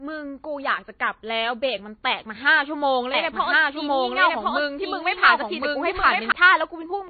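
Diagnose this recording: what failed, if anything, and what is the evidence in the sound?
Codec stage: the whole clip has nothing above 4.6 kHz, with the smeary, watery texture of a heavily squeezed encode. That points to low-bitrate audio saved at a high bitrate, likely a very low-bitrate MP3 re-encoded at 320 kbit/s, which can't restore what the first pass discarded.

From 3.14 s to 6.32 s there's a doubled audio track: a second full-band copy of the speech trailing roughly a second behind at about the same level, with no room colour, cutting in and out abruptly. Likely an edit or capture step holding two misaligned copies.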